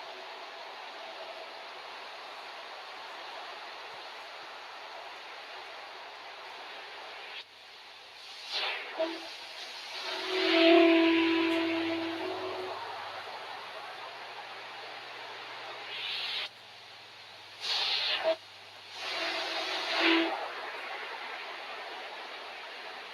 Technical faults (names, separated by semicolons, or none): noise suppressor applied to music or sounds